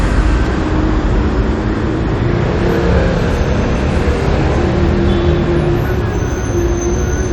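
No faults detected anywhere in the audio.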